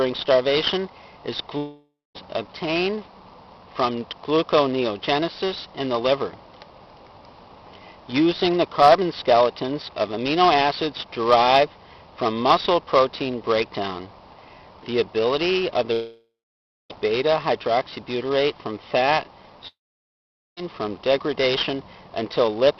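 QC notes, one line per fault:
1.57–2.17 s, 15.93–16.92 s, 19.68–20.62 s, long network dropout: about 0.6, 1.0 and 0.9 s of sound lost, likely from packets not arriving. Each gap begins as a fading smear of the last sound, then goes flat silent for about 0.23, 0.6 and 0.83 s, seen as blank spectrogram columns and a flatlined waveform before the audio resumes further on.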